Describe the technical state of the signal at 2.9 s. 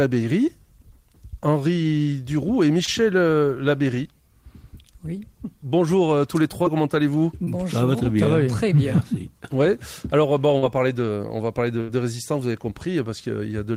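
A short concealed packet loss sits at 2.85 to 2.89 s: about 20 ms of audio never reached the decoder in time, and the receiver filled the hole by extending the preceding sound before blending back into real signal. The result is a brief smear or wobble.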